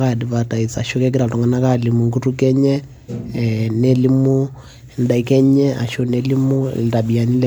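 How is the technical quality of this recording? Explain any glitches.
The quality is degraded throughout by generation loss. The speech sounds swirly, hollow and smeared, with blurred onsets, likely from MP3 re-encoding about three times, which fits a 96 kbit/s chain.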